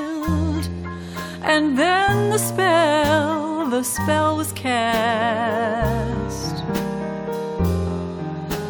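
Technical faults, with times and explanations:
Nothing stood out on listening.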